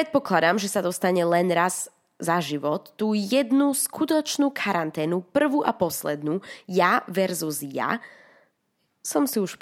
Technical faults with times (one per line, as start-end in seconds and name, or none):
none